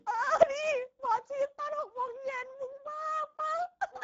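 Throughout the speech, the Speex codec damage is plainly audible: the voice sounds hoarse and noisy because too few bits carry the excitation, which fits a bitrate near 10 kbps. Content stops at 7.7 kHz, and unlike a simple low-pass cut, the upper band is a shaped, hissy fill.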